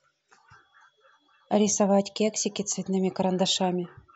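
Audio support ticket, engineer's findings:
Listened to the speech clip in full; nothing stood out, no findings to log.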